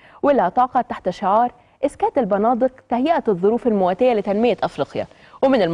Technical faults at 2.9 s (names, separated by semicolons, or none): none